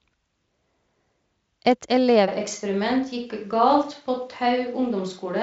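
A switch to a distant microphone hits this speech recording at 2.29 s and lasts to the end. From that moment the sound turns hollow and roomy, thinner in the bass, about 5 dB quieter, with background noise rising to roughly 40 dB below the speech. The abrupt change most likely means the close microphone dropped out and a pickup further away carried on. The Speex coding, with content up to about 7.7 kHz, adds at most faint damage.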